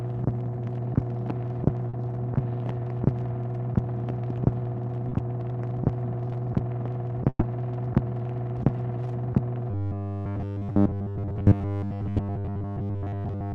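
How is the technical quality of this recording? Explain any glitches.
The recording has several clear call-transmission glitches, and the final stretch is badly degraded. It has passed through a call codec that removes everything above about 12 kHz.

Short concealed packet loss at 1.89 s (40 ms) and 5.09 s (20 ms): the receiver extended the preceding sound to cover the missing audio. You hear a brief smear. The spectrogram shows a short, over-smooth patch.

A burst of packet loss at 7.29 to 7.43 s: 120 ms never arrived. The filled-in sound fades to about 40 ms of silence, which shows as a tapering gap in the waveform, then the audio resumes further on.

Robotic sound from 9.71 s to the end: a rigid, metallic 100 Hz buzz replaces most of the detail. It is likely caused by a repeated 10 ms buffer. A spectrogram shows evenly spaced horizontal harmonic lines.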